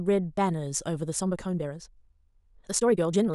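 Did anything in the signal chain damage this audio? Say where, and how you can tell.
Yes. From 1.07 s to the end of the speech, there's a time-stretched section: the pace jumps abruptly to about 1.84 times the earlier rate while the pitch stays unchanged, so the delivery sounds rushed rather than higher. The likely cause is a software time-compression step in editing or processing, fitting the audio to a shorter length by dropping short segments and splicing the remainder together, which produces that hurried texture.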